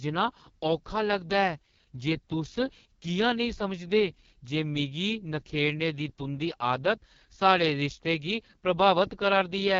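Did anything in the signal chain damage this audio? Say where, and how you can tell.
Yes, at the codec stage: AMR wideband (HD Voice) coding across the whole clip. The speech turns rough and raspy throughout, which points to the lowest AMR-WB rate, about 6.6 kbit/s. Nothing reaches above 7.2 kHz, and the band above 6.4 kHz is filled with shaped noise. That noisy top band and the raspiness separate it from a plain low-pass filter.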